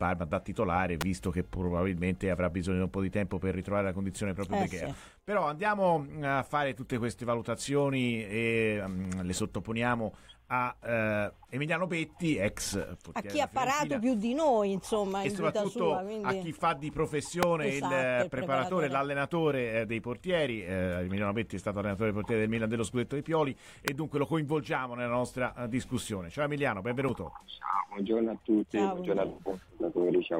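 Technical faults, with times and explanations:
1.01, 17.43 and 23.88 s, electrical switching spike: sharp, fairly loud snaps over the sound, likely arcs from a nearby switch or motor picked up by the audio line.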